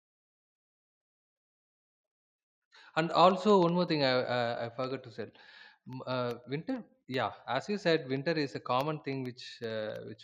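A steady ticking runs under this speech recording from 0.11 s to 10.15 s, one tiny click every 0.064 s. These are periodic USB or driver dropouts, where minute slivers of audio fall to silence at a fixed interval.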